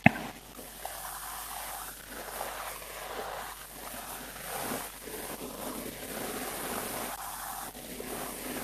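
Speech with mains hum running throughout, a steady low tone at 50 Hz with a few low harmonics, sitting only about 15 dB below the speech. A ground loop or nearby transformer is feeding the power line in. Unlike rumble or wind noise, it holds one fixed pitch and never fluctuates.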